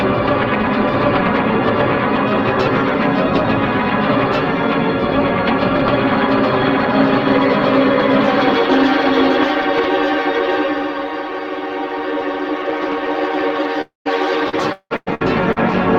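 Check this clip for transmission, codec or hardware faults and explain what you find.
Three network-type faults, all bunched into the last couple of seconds.

From 13.81 to 14.08 s the sound smears into a fading buzz, then drops to silence for about 150 ms. A long network dropout is the likely cause: roughly 220 ms never arrives, and the receiver papers over it by stretching the last sound.

Right at 14.05 to 14.07 s, one 20 ms packet was lost and rebuilt from error correction, using the low-bitrate copy in the next packet, so it comes through rougher and noisier.

Between 14.49 and 15.58 s there's repeated packet loss (robotic sound). Five gaps, the longest 177 ms, each get patched by continuing the last sound. That concealment covers about 38% of the stretch, which makes it choppy.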